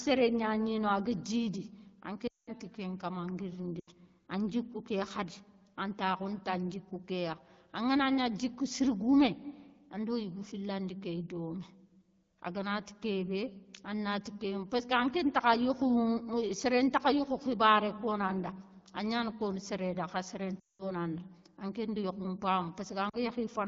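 Speech clip where radio errors caused lost AMR speech frames: the decoder stretched and faded the last good sound at 2.27–2.51, 3.80–3.90, 20.59–20.93 and 23.09–23.17 s.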